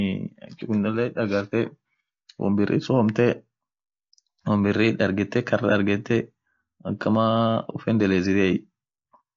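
From start to finish the speech sounds rough and grainy, with a hiss-like fill between the harmonics and a thin, somewhat synthetic top band. This is likely low-delay AAC compression of the AAC-ELD kind, at a damage level that fits a bitrate near 32 kbps. It codes about 500 frequency lines a frame with a low-delay window, and at this low rate noise fills the gaps between the harmonics. That tells it apart from ordinary band-limiting, which only dulls the top, and from long-frame codecs, which smear attacks instead.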